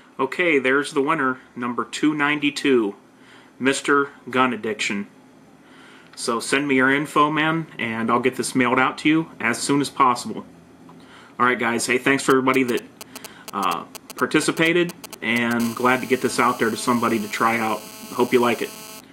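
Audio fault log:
12.30–15.61 s, GSM signalling bursts: A nearby 2G phone is transmitting only short groups of radio bursts, as it does while exchanging control traffic with the network, and the audio circuitry is rectifying that energy into the audio path. Because the bursts come in clusters, each pulsed at about 217 Hz, the result is a galloping dit-dit-dit of ticks and brief buzzy fragments, roughly 10 dB below the wanted audio and entirely unrelated to it.
15.61–19.01 s, GSM phone buzz: The same phone has moved into a call and now transmits continuously in its time-slot pattern, 217 bursts per second, which the circuitry again demodulates into the audio. The interruptions merge into a steady, hard, raspy buzz at 217 Hz, rich in harmonics that give it a gritty, electrical edge. It sits at about 19 dB below the signal and runs unbroken to the end of this stretch.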